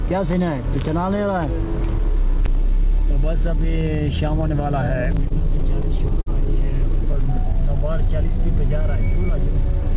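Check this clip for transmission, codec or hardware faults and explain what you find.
Two jitter-buffer faults are present, heard over a call path whose G.711 mu-law coding stops everything above 4 kHz.

Repeated stalls (stutter), 5.12 to 6.29 s: late packets drained the buffer seven times, and the receiver held the last sound for up to 50 ms. Unlike packet loss, no audio goes missing. It simply hitches and drags.

Jitter buffer slow-down, 7.13 to 8.41 s: repeated pitch periods add 44 ms, so playback runs at 97% speed at an unchanged pitch. It gives a smooth stretch, not stutter's abrupt breaks.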